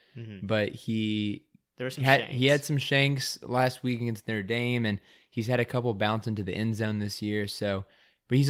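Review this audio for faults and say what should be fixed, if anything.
Nothing here needs fixing; the recording comes through without any technical trouble worth flagging.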